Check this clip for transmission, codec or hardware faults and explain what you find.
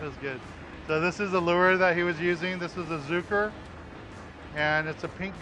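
No faults turn up anywhere in the clip. Nothing in what can be heard points to a problem anywhere along the path the audio took.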